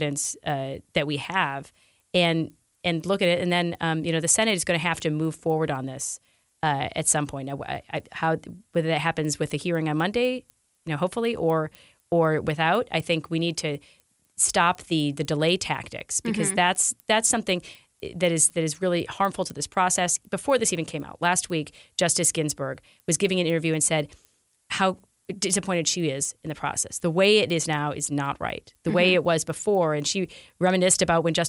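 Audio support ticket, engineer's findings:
Regular ticks at 4.0 Hz throughout, only under signal. Resampler restarted on every block: 250 ms blocks converted independently, consistent with a 24 kHz to 48 kHz upsample, leaving edge errors.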